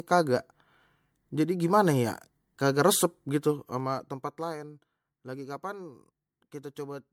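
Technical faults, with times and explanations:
Throughout: generation loss. The speech sounds swirly, hollow and smeared, with blurred attacks, worse than one MP3 pass at roughly 96 kbit/s would explain. Likely about five repeated decode and re-encode passes, each quantising on a shifted frame grid and compounding noise and spectral holes.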